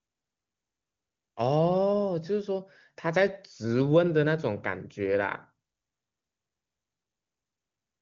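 No technical faults can be heard in the clip at any point.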